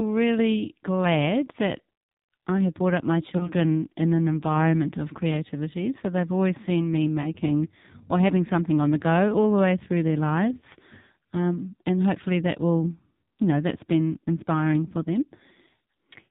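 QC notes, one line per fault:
throughout: AMR narrowband mobile codec. The speech sounds buzzy and synthetic, thin and boxed in with nothing above 4 kHz, because AMR-NB at 5.9 kbps rebuilds each 20 ms frame from a vocal tract model driven by very few pulses, so heavy coding damage remains audible.
3.38 to 3.52 s, 7.22 to 7.29 s, 10.58 to 10.65 s: lost AMR speech frames. After "have brought up my", after "they've always seen me" and after "the way through their", brief warbling dips break the speech. Single 20 ms frames failed at the first two and two frames (40 ms) at the third, so the decoder repeated the last pitch and vocal tract settings at falling gain.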